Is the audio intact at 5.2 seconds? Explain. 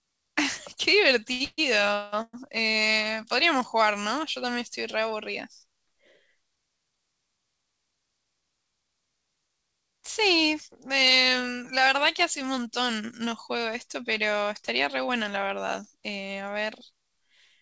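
Yes, the audio is intact at 5.2 seconds, with the speech carried cleanly through the G.722 call path, whose band limit leaves nothing above 8 kHz.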